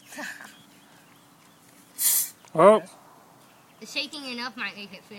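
No technical faults can be heard anywhere in this audio.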